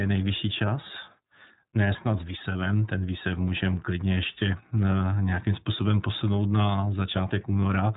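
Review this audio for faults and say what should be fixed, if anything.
The iLBC codec runs through the whole speech clip: nothing passes above 3.8 kHz, and the plainly audible rough, synthetic texture fits its 30 ms frame mode at 13.33 kbps, each frame's excitation coded independently. Unlike a simple low-pass filter, the band limit comes with that coarse grain. To prevent it, capture or transmit with a wideband codec instead of iLBC.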